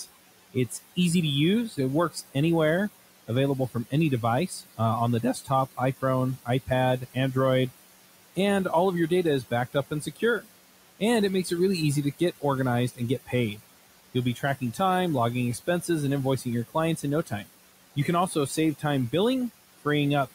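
Noise suppressor artifacts run through the whole clip. The room noise, which sits about 17 dB below the speech, is pulled down by about 17 dB in the gaps and returns under each phrase. On a spectrogram the background floor pumps up and down with the speech.

Speech cut by the noise suppressor occurs in stretches at 0.0–0.97 s, 1.69–2.35 s, 3.28–3.93 s, 4.48–7.16 s, 9.1–11.51 s (after "and all of your", ending before "it really easy to"), 12.19–14.8 s (just after "it really easy to"), 15.55–19.13 s and 19.78–20.33 s. The suppressor mistakes quiet parts of the speech for noise, so soft consonants and word endings are dipped by about 11 to 19 dB, with the deepest cuts near 4.48–7.16 s and 12.19–14.8 s. Within each stretch the affected moments add up to between a tenth and half a second. They sound swallowed or faint. The waveform shows word tails dipping, and the spectrogram shows weak high-frequency consonant energy carved away along with the background.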